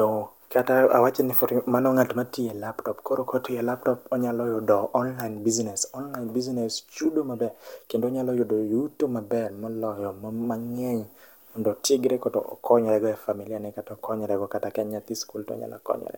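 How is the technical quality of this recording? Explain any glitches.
No glitches or technical faults turn up anywhere in the recording.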